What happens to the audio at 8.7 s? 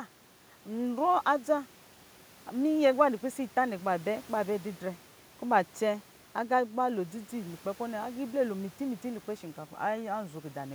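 Nothing goes wrong at 8.7 s; the speech carries on intact through that moment, with no dropout, click or distortion.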